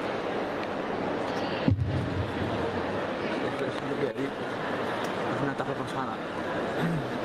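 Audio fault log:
Nothing stood out on listening.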